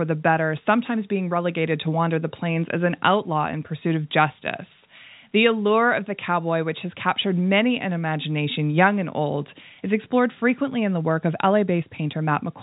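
Nothing stood out on listening to this telephone-band speech recording, which carries no sound above about 3.8 kHz, as expected of G.711 coding.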